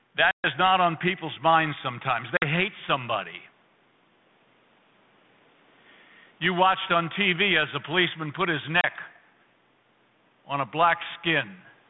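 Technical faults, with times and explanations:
0.31–0.48 s, 2.37–2.45 s, 8.81–8.85 s: packet loss on an ADPCM call. About 130, 50 and 30 ms drop to hard-edged silence, then the decoder's predictor and step size are out of sync, so sound returns slightly distorted before settling.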